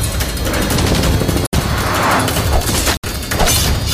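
At 1.47 to 1.55 s and again at 2.97 to 3.05 s the sound cuts to silence for about 65 ms, then carries on, most likely a Bluetooth stall with the headphone buffer running dry. Unlike a click or codec glitch, each gap is clean silence.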